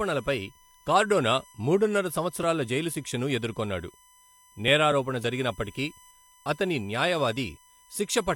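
A USB whine runs through the whole speech recording: a fixed 1 kHz tone, roughly 30 dB below the voice, from the bus's 1 ms frame current leaking into the audio. On a spectrogram it shows as a steady horizontal line at 1 kHz.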